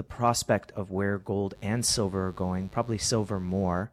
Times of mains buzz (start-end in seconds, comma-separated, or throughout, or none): 1.52-3.86